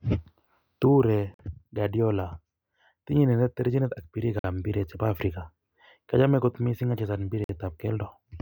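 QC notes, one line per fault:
1.34–1.39 s, 4.39–4.44 s, 7.44–7.49 s: gap between chunks. The speech stops dead for 50 ms at each point, with hard edges on both sides, and the holes recur every 3.05 s, which is 3 s of audio plus the gap. No material is missing. Each 3 s chunk plays out whole, but silence is inserted at every join, likely from codec padding or a player that starts each chunk late.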